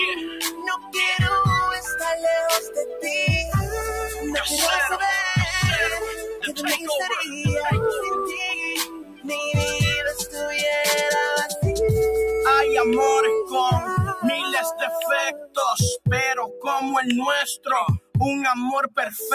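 Noise suppressor applied to music or sounds, throughout: a speech-oriented suppressor treats sustained tones and ambience as noise, so levels pump by around 10 dB and tails thin out.

Sound cut by the noise suppressor at 0.15–0.96 s (down about 12 dB), 2.6–3.05 s (about 10 dB), 6.05–7.43 s (about 12 dB), 8.27–9.32 s (about 16 dB), 10.18–10.4 s (about 10 dB), 14.15–15.57 s (about 19 dB), 16.47–16.67 s (about 6 dB) and 17.57–18.15 s (about 19 dB). Held or decaying sound sinks or is cut short while sharp onsets pass. The deepest drops are at 14.15 s and 17.57 s.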